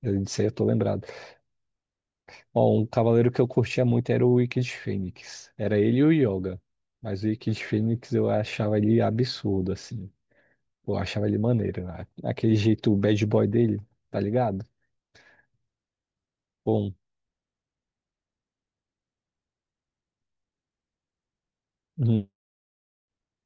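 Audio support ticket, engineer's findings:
No technical faults detected in the speech signal: no dropouts, clipping, distortion or timing irregularities found in the path.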